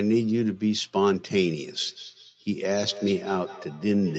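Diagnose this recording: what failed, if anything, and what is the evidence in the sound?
Feedback echo between two devices, from 1.81 s to the end: the speech repeats roughly every fifth of a second, peaking about 17 dB below it. A nearby device replays the call into this microphone, and the call processing's echo canceller cannot remove sound it never played.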